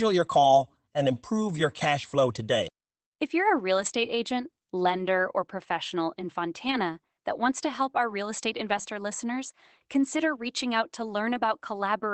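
Lost packets were rebuilt from error correction. The decoder played the low-bitrate copies carried in following packets, so there are no gaps, only brief rougher, noisier patches: 60 ms at 3.77 s after "you're a real", 20 ms at 4.97 s, 40 ms at 6.67 s, 60 ms at 8.69 s after "help our real estate", and 20 ms at 11.33 s after "consider reaching out to".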